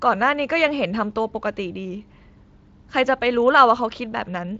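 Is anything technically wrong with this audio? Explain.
No, nothing here stands out as a technical problem, and the speech sounds as it should, with its top end rolling off around 7.7 kHz the way the Speex codec carrying it leaves it.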